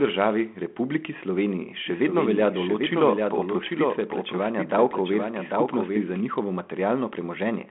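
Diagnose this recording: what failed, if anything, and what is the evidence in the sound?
Doubled audio track from 1.86 to 6.20 s: a dry copy trails about 0.7 s behind, around 5 dB down, starting and stopping abruptly, likely from a slower second capture path.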